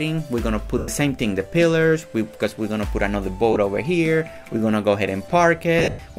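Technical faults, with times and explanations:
0.78–0.88 s, 3.53–3.56 s and 5.79–5.99 s, lost LE Audio frames: gaps of 100 ms and 30 ms, then 170 ms scattered across 200 ms, longest about 100 ms. The LC3 decoder repeats the last spectrum with random signs, so the sound smears into noise and fades during the longer gaps.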